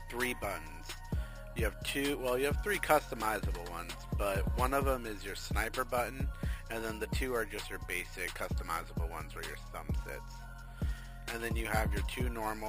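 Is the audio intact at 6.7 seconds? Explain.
No. Imaging from sample-and-hold upsampling runs throughout, including 6.7 s. Held samples mirror the spectrum into 6 to 12 kHz, about 17 dB down, as a metallic fizz.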